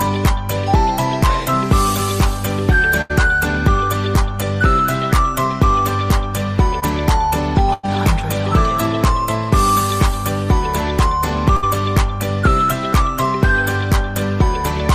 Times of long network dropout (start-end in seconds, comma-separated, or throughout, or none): none